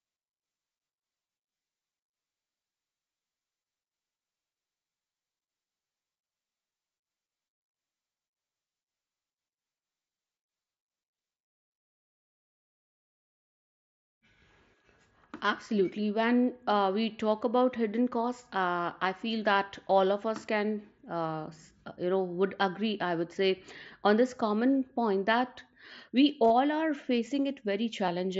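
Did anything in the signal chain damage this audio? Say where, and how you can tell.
Yes: concealed Bluetooth headset packet loss, on the radio link. Single gaps at 19.04 s, after "about hidden costs uh", and at 28.07 s are nearly hidden. From 26.44 to 26.50 s, after "common point that we", scattered losses turn briefly buzzy. The receiver patched each gap by repeating recent waveform.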